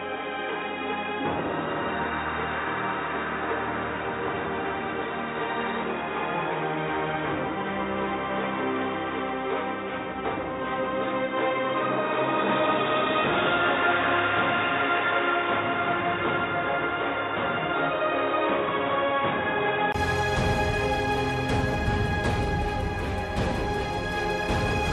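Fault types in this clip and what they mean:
Input switched to a poorer device: from the start to about 19.94 s the sound is dull and boxy with nothing above 3.8 kHz, then it opens up after a 20 ms gap. That's likely a narrower-band mic or headset call profile, with its own faint background noise well below the signal.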